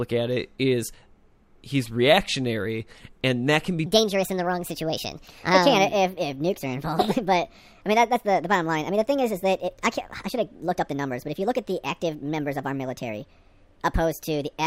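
From 3.86 s, just after "and that can be", the speech jumps into a section at the wrong speed. It runs 1.43 times fast to the end, pitched up roughly seven semitones, likely from a clock mismatch.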